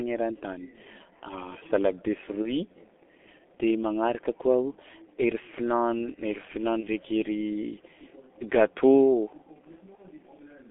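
Speech passed through the G.723.1 codec at a rate that fits its 6.3 kbit/s mode, squeezed into a telephone band of roughly 250 Hz to 3.5 kHz with heavy coding damage, so the voice sounds muffled and hoarse throughout and consonants smear. VoIP packet loss concealed by the speech codec occurs at 2.43 to 2.54 s, 6.80 to 6.87 s and 9.95 to 10.03 s. Each gap sounds like one missing 30 ms frame, which the decoder filled by extending its last pitch and filter, leaving a brief, fading smear that lingers past the gap.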